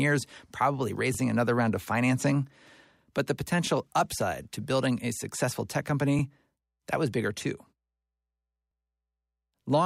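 Overlapping chunks cause a brief stutter at 1.15 to 1.17 s, 3.67 to 3.69 s and 6.19 to 6.22 s. The speech was handled in 2.5 s chunks, each starting before the previous one ended, so 23 ms plays twice at every join, heard as a click-like repeat.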